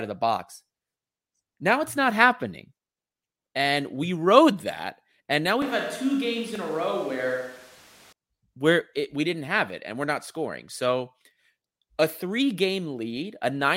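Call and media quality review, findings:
Switch to a distant microphone, 5.62 to 8.13 s: close-mic feed likely dropped, capture falling back to a far device. Sound turns abruptly roomy and hollow, bass thinned, level down about 5 dB, room noise rising to roughly 25 dB below speech, then snapping back.

Repeated buffer, 6.55 s: playback starved of fresh audio, so the device replayed its last block twice more. The repeated slice is about 1.45 ms long, which fits a 64-sample buffer, so it is heard as a brief click or buzz, not a stutter. Nothing audible is missing.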